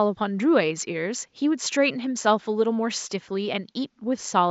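Speech recording with no technical faults; the only background is the room's own noise, sitting about 51 dB below the speech.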